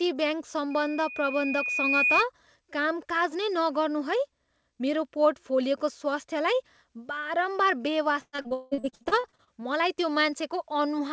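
From 0.70 to 2.25 s, a loudspeaker feedback squeal: the microphone re-amplifies its own loudspeaker, and a 2.5 kHz tone swells over roughly a second and a half to about 5 dB above the speech.

From 8.21 to 9.50 s, repeated packet loss: audio keeps going missing, the longest hole 178 ms, and about half the stretch is filled by stretching earlier sound, so it turns choppy and robotic.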